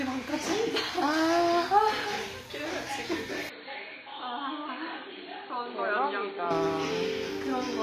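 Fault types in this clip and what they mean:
HE-AAC compression: The treble sounds gritty and metallic, as though rebuilt from copied lower bands rather than captured, and nothing sits above 14.9 kHz, likely from HE-AAC at a low bitrate around 24 kbps. A spectrogram shows a hard ceiling with repetitive-looking upper bands.
input switched to a poorer device: From 3.49 to 6.51 s the sound turns dull and boxy, likely from a switch to a lesser input, with no gap at either change. A spectrogram shows everything above 4.4 kHz vanishing, a new noise floor roughly 35 dB down, and a waveform about 5 dB smaller.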